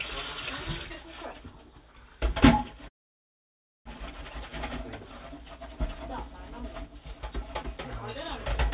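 A clip of sounds carried over a call link, with nothing above 4 kHz, which fits a narrowband G.711 A-law path. A call audio freeze runs from 2.88 to 3.87 s. The audio stalls, then falls almost silent for about one second. Nothing is lost, but everything after arrives 0.97 s late. The likely cause is held-up packets draining the jitter buffer.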